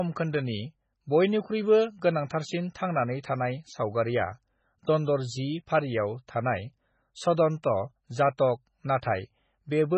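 Throughout, the speech sounds watery and swirly, with nothing above 8.3 kHz; likely MP3 compression at a very low bitrate, heavily zeroing weak frequency lines.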